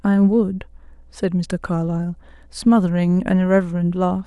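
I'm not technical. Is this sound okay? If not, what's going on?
No. There's mains hum: the power supply leaked into the recording, adding a steady, fairly quiet low drone at 60 Hz beneath the speech from start to finish.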